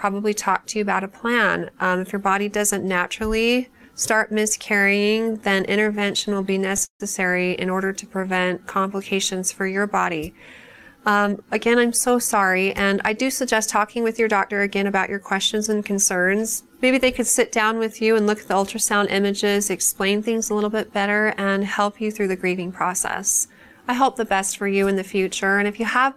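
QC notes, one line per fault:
4.64–7.01 s, repeated stalls (stutter): 27 short hold-ups in just over two seconds, adding about 407 ms of stretched sound with nothing lost. The longest single hold is 152 ms, and about 17% of the span is filler. Packets were arriving late or slower than playout, so the jitter buffer kept running dry. Each time, the receiver extended the last sound and faded it on the longer waits, which gives the dragging, hiccuping motion.
7.88–8.97 s, jitter buffer slow-down: playback runs at about 90% speed with pitch unchanged, adding 114 ms over roughly a second. Just after the stall run, the buffer was low or had raised its target delay. The receiver rebuilt its reserve by repeating single pitch periods and bits of pause in quick succession. That is why sounds are drawn out rather than lower in pitch.
10.90–14.80 s, jitter buffer speed-up: about 6% fast at the same pitch for almost four seconds, with roughly a third of a second trimmed in total. 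The buffer was holding more than its target, so the receiver cut out tiny pieces of one or a few pitch periods, over and over. The result sounds hurried but not higher.
22.20–22.61 s, jitter buffer speed-up: a brief burst at about 108% speed, removing a few tens of milliseconds by the same pitch-period trimming to shed excess buffered delay. It is heard as a momentary rush.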